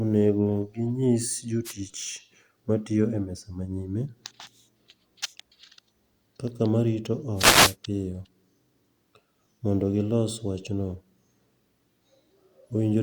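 Wireless microphone noise hits occur at 1.64–1.73 s, after "onego ginyis", and 7.36–7.76 s, after "kaka marito", in this speech recording: bursts of static swish in as the analogue FM radio link fades and receiver noise rises over the signal.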